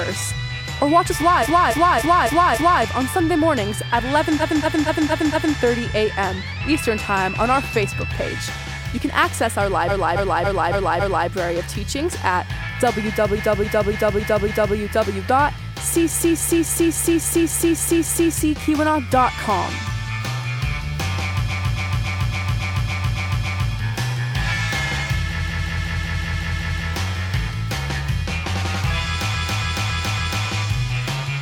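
Repeated frames stutter the audio at 1.42–2.81, 4.39–5.55, 9.87–11.26, 13.35–14.75, 16.09–18.32, 21.48–23.71, 25.38–26.87 and 29.33–30.44 s. A short compressed block was sent again and again, so each stretch loops, mostly a 278.6 ms block, but 232.2 ms at 4.39 s and 185.8 ms at 25.38 s, which fits runs of about four to six frames. It replays four to eight extra times, adding up to 2.23 s per event.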